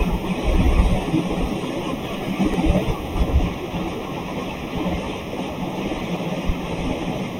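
It's a speech recording with two separate problems. Throughout, the sound is hollow and a bit phasey, the classic channel delay comb filtering you get when one channel runs roughly a third of a millisecond behind the other and the pair is folded to mono. That puts the first cancellation notch somewhere around 1.5 kHz, with further notches spaced up the spectrum from there. On top of that there are five points where the speech suddenly jumps forward with no gap of silence, at 0.43, 1.41, 2.54, 3.88 and 6.17 s. The skips at 0.43, 3.88 and 6.17 s are the big ones, each losing something like 70 ms. At 2.54 s it's closer to 40 ms, and 1.41 s is a small one, roughly 20 ms. The sharp splice with no silence most likely comes from a dropped buffer (overrun), where the capture side fell behind and the hardware overwrote a chunk before it was read.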